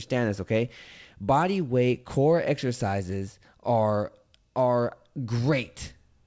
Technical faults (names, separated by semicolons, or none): none